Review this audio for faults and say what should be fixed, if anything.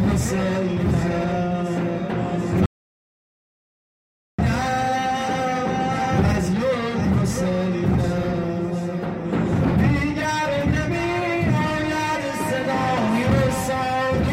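The sound cuts out abruptly at 2.66 s and returns mid-flow at 4.39 s, leaving about 1.73 s of dead silence with no room tone: an audio dropout to silence. The input was likely lost through a disconnected device or mute while recording continued writing zeros. Securing connections and monitoring input levels during capture would prevent it.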